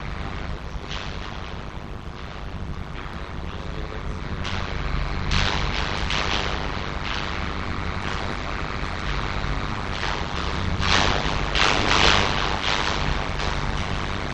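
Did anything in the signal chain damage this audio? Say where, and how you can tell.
Yes. Overlap-add ripple in frame processing runs throughout. Level swings by about 60 dB at around 100 Hz, giving a metallic buzz. Rejoined frames don't sum evenly.

Overlap between stream segments at playback causes a tiny skip at 7.13 s. Two segments' timestamps overlapped, so audio was cut away. This fits 4-second segments.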